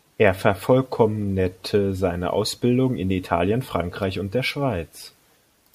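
No technical faults are audible anywhere in the speech.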